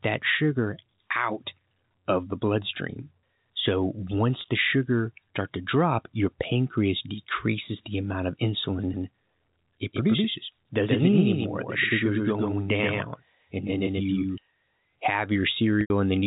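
A telephone-band speech recording, limited to 4 kHz by its G.711 A-law coding, with two kinds of fault. Packet loss with pitch repetition occurs twice. At 4.41 to 4.44 s, 30 ms of audio went missing and the receiver filled it by repeating the last pitch period, so the sound briefly holds as a slightly buzzy note. At 15.81 to 15.90 s, a 90 ms gap, consistent with several consecutive packets, is bridged the same way but fades toward silence before speech returns through a short cross-fade. From 8.94 to 14.38 s there is a doubled audio track, likely a second, slower capture path or an edit leaving two copies out of step. A full-band copy about 5 dB quieter trails the original by around 150 ms with no reverberant colour, cutting in and out abruptly at both ends.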